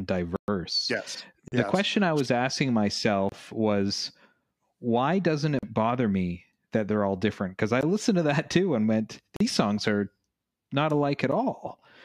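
Speech, broken seven times by blocks of digital silence. Each time the signal drops straight to silence and comes back with no fade. The gaps are at 0.36 to 0.48 s (120 ms), 1.48 s (40 ms), 3.29 s after "question I was asking" (28 ms), 5.59 s (40 ms), 7.81 s, 9.36 s between "that too and went" and "these songs are not" (40 ms), and 11.32 s after "are not alike at". The 120 ms gap is a clear hole. The shortest one is just a tick. Dropouts like these point to output buffers not being filled in time.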